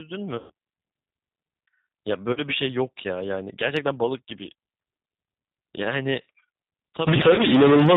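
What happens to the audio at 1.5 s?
At 1.5 s the speech carries the G.729 codec coding that runs through the whole clip, consistent with an 8 kbit/s stream. Speech is rebuilt from a vocal tract filter, pitch predictor and sparse pulses, so it sounds rough and synthetic. A spectrogram shows a hard ceiling at 4 kHz.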